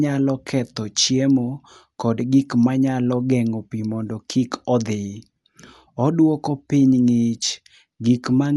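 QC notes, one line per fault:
throughout: Dolby Digital compression. The speech sounds dull, with nothing above 11.4 kHz and a rough, fluttering noise clinging to tonal parts. This is likely AC-3 coding at a low bitrate, fitting about 64 kbps, which narrowed the band and filled starved frequency lines with dither noise.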